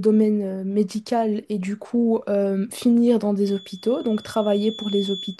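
From 3.4 s right through to the end of the speech there's a feedback whistle, a thin steady tone at 3.4 kHz sitting roughly 15 dB under the talker and swelling and fading slowly in level. It's likely a loudspeaker-to-microphone loop hovering just at the edge of feedback, so that one frequency keeps ringing without ever building into a full howl.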